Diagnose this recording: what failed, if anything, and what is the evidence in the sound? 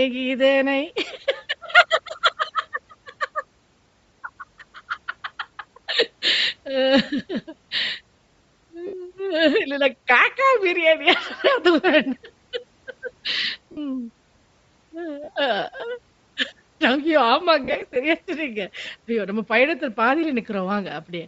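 Throughout, the speech has a breathy, grainy edge in the upper range, plainly audible. This is a codec-stage problem, likely Bluetooth LC3 compression running at a low rate, consistent with 32 kbps and 10 ms frames, where the upper spectrum is discarded and refilled with noise.

Brief noisy smears replace the speech at 8.87 to 8.94 s, 13.72 to 13.77 s, and in scattered bursts across 15.24 to 15.37 s and 17.64 to 17.96 s, the longest run about 40 ms. These are lost LE Audio frames on the radio link, which the decoder covered by repeating the last spectrum with randomised signs.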